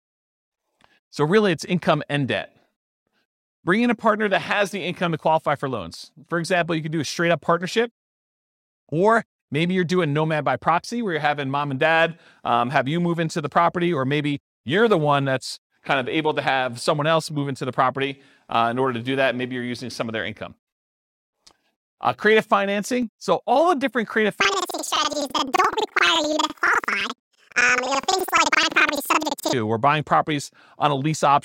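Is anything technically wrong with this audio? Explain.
Yes. From 24.41 s to 29.54 s, between "all the different creative" and "or buying", the speech jumps an octave high and picks up a flutter near 11.7 Hz while its pace stays normal. This is planar audio read as interleaved. Each block of about 85 ms, which fits a 4096-sample block, stores all left samples and then all right, but is read as alternating pairs, so each half plays at double speed, one after the other.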